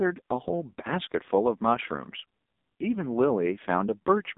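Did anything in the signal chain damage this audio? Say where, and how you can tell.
Yes, at the codec stage: the whole clip carries AMR narrowband mobile codec damage. A spectrogram shows a band from 200 Hz to 3.7 kHz and nothing above 3.8 kHz. The heavily buzzy, synthetic speech from its pulse-excited vocal-tract model fits a low rate near 5.9 kbps.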